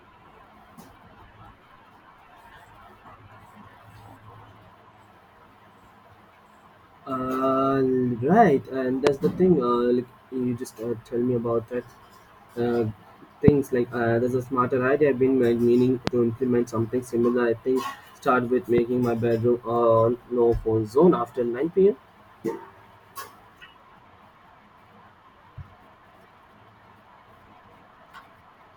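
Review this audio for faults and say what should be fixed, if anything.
Four loud pops land on the speech at 9.07–9.09 s (just before "the thing"), 13.48–13.51 s, 16.07–16.10 s (between "I've been like meaning" and "to implement something similar") and 18.78–18.80 s (between "I think start with" and "my bedroom on no"). Each is a single sharp pulse, about 20 dB above the speech, or about 15 dB for the last. The likely cause is a voltage spike from a switch, static discharge or driver glitch entering the signal path. Unlike a dropout click, the speech carries on unbroken underneath rather than losing a piece. Secure cables and connectors, ground the equipment, and avoid switching or plugging anything in while recording.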